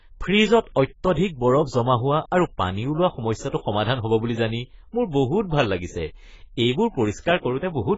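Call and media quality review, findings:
AAC compression artefacts, full clip: dull speech with no content above 7.6 kHz, smeared fizzy sibilants, warbling on sustained sounds. Likely an AAC-LC encoder at very low bitrate, consistent with about 16 kbps. Heavy damage: cut-off pulled down.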